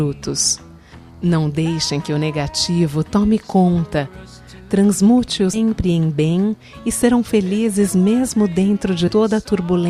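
At 5.53 to 5.58 s and again at 9.07 to 9.11 s, compressed frames are skipped. Whole 20 ms frames go missing, so the audio jumps ahead by about a fifth of a second, then about a tenth. On a spectrogram it shows as a narrow vertical seam where the surrounding patterns stop lining up. The waveform shows an abrupt change in its envelope.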